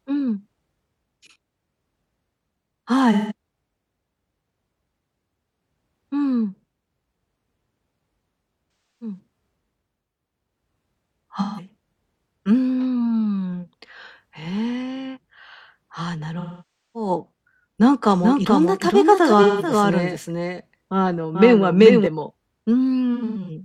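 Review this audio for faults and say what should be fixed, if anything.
AAC frame loss with concealment shows up six times: 3.12–3.32, 8.81–9.19, 11.40–11.68, 16.39–17.10, 19.42–19.70 and 23.14–23.50 s. The decoder patches each gap from the last good spectrum, so you get smeared, phasey speech. The longest gap, 555 ms at 16.39 s, sags toward silence before recovering. The last one is broken up into short runs. The fix is to send the stream over a transport with retransmission or forward error correction so frames stop dropping.

There's a doubled audio track from 18.23 to 22.07 s. A dry, full-band second copy of the speech trails roughly 0.4 s behind, about 5 dB quieter, and starts and stops abruptly. It's likely a second capture path or an edit leaving two out-of-step copies in the mix. Make sure only one source feeds the mix and check the edit there for overlapping regions.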